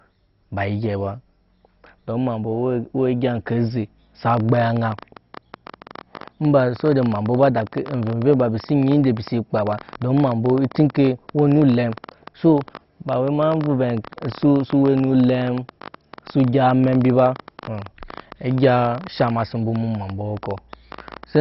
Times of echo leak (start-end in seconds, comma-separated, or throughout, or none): none